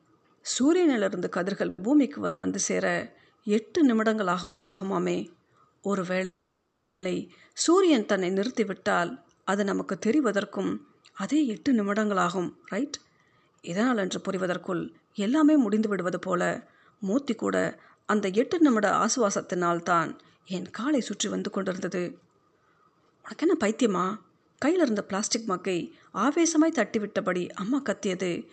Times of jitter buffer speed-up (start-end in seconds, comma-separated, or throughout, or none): 12.49-28.25